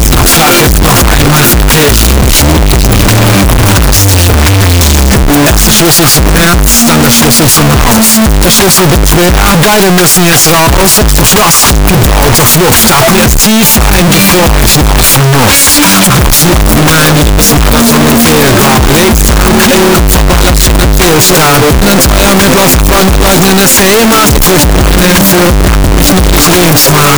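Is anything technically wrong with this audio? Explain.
Yes. Throughout, the audio is a float read as integer: the sound sits as a near-square wave at an almost fixed, high level, harsh and very loud, with background noise as loud as everything else. This is likely 32-bit float samples read as 32-bit integer. Unlike ordinary clipping, the level stays pinned whatever the original loudness, yet pitch remains followable.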